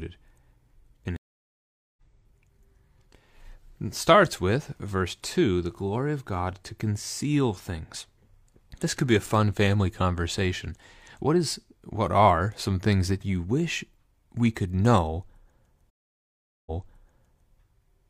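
At 1.16 s and 15.90 s the speech drops to silence for about 0.8 s: a stream reconnect, where the player restarts decoding mid-stream. The first resumes roughly a second later, skipping material; the second resumes 0.84 s earlier, repeating some. Unlike a plain dropout, the timeline jumps.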